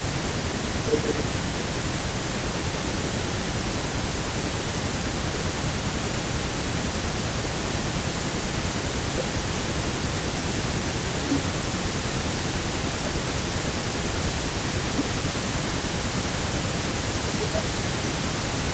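From the start to 0.83 s and again from 1.58 s to the end, an echo leak trails the speech by about 306 ms at roughly 15 dB down. A fixed-delay copy like this, rather than diffuse room reverb, points to loudspeaker pickup that an echo canceller likely failed to remove. Overlapping this, the speech is suppressed in double talk at 0.81–3.98, 5.1–7.17, 8.04–10.39, 10.82–13.75, 14.71–16.33 and 17.24 s to the end. The level sinks by around 15 dB, about 10 dB in the last stretch, while the far side talks, likely from the canceller ducking both. These are gated dips tied to overlapping talk, unlike steady codec dropouts.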